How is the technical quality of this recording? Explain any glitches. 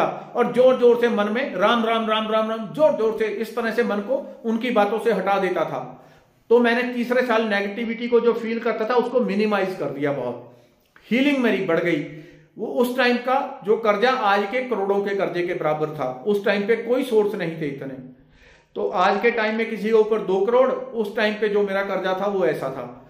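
Two short glitches spoil the recording. A Bluetooth SBC bit pool drop occurs from 7.84 to 9.23 s and again from 18.02 to 19.62 s. A congested wireless link forced the encoder to spend far fewer bits, consistent with a fall to roughly 83 kbps. The highest sub-bands are starved and the rest coarsely quantised, so the treble turns dull and a gritty noise rises until the rate recovers.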